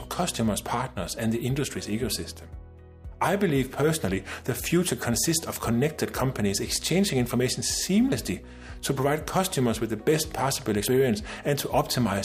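At 8.12 s the sound jumps abruptly, skipping ahead by around 40 ms, and at 10.88 s a second, longer jump of roughly 70 ms follows. These are likely a dropped buffer (overrun): the capture side fell behind, the hardware overwrote unread audio, and the surrounding pieces were spliced together. No gap of silence separates the two sides, unlike a dropout, so the result is a discontinuity.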